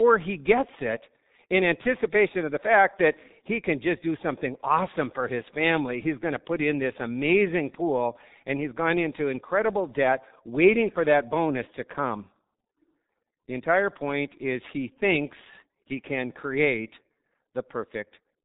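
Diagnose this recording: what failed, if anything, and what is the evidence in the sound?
The codec stage failed: G.723.1 coding throughout, with heavy damage and nothing above 3.8 kHz. Hoarse, smeared consonants, unlike a plain low-pass filter, point to a roughly 6 kbit/s voice model updating slowly.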